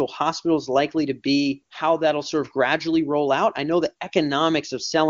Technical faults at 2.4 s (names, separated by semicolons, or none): none